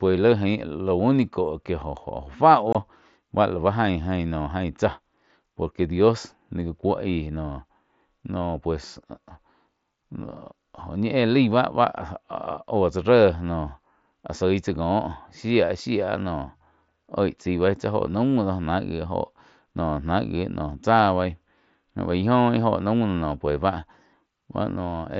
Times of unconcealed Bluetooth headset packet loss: 2.73-2.75

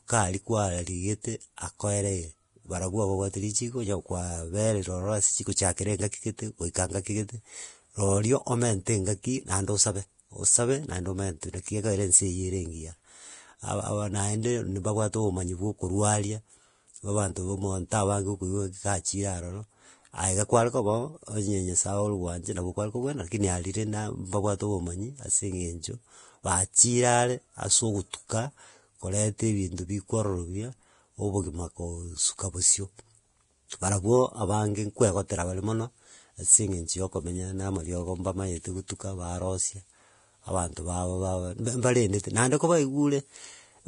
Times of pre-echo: 11.41-11.43, 38.88-38.90

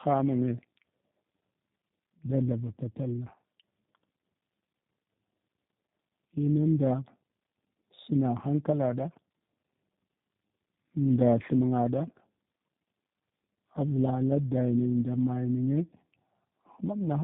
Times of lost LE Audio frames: none

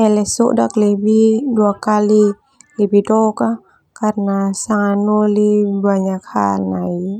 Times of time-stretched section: 4.20-7.20

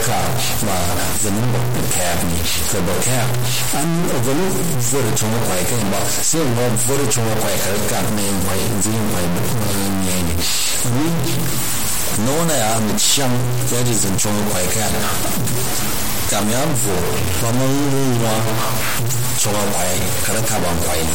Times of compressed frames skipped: none

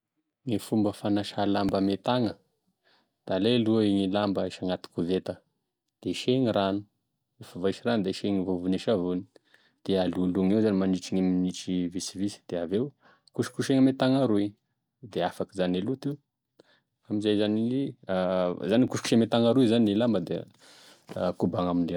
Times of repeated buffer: 1.69, 18.88

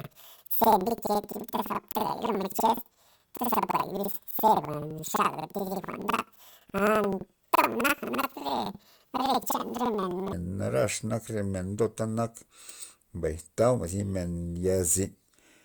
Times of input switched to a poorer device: none

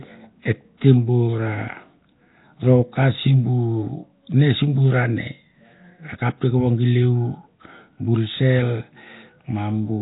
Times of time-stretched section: none

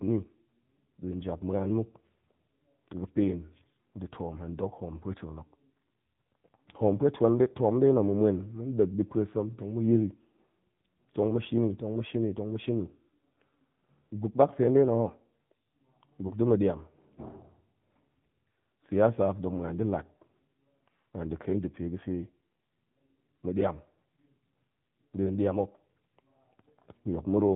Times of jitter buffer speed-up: none

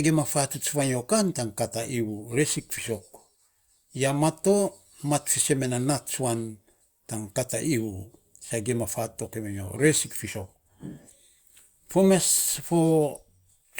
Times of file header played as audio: none

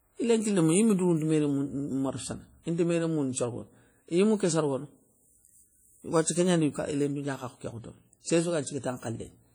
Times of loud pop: none

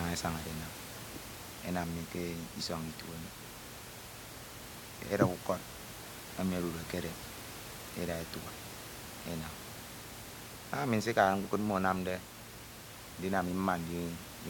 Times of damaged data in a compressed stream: none

